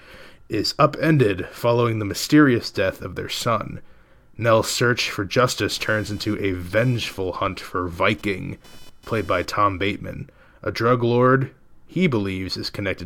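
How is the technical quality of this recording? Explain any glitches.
The recording has one glitch, computer activity noise, running from 5.71 to 9.80 s, starting right after "search for". A buzzing chirp pulsing at around 500 Hz sits roughly 30 dB below the speech. It comes from load changes in the computer shifting the audio circuit's shared ground, so it tracks machine activity rather than the speech.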